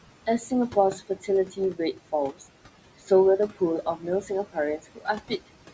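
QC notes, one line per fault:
Throughout: overdone noise removal. The suppressor is set too strong, so bands near the noise estimate vanish. The background turns to twinkling near-silence.
Throughout: noise suppressor artifacts. Steady room noise, about 15 dB below the speech, is pulled down by about 18 dB between words. It rises again underneath them.
0.26–2.43 s and 3.49–5.4 s: speech cut by the noise suppressor. Quiet speech was mistaken for noise and dropped by up to about 15 dB and 14 dB. Roughly half a second in each span sounds swallowed.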